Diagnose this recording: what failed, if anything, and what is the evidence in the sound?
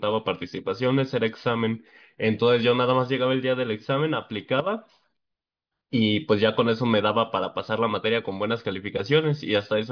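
Nothing failed; no faults are audible anywhere.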